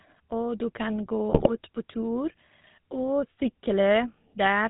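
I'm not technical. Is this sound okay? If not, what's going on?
No. GSM full-rate codec, throughout: an old mobile-phone speech coder rebuilds the voice from coarse pulses and drops the high tones, so speech sounds buzzy, gravelly and muffled. GSM bit errors, from 1.31 to 1.5 s, just after "du kan": corrupted data on a weak phone link garbles the coder's settings, so the voice briefly breaks into squawks and gargling.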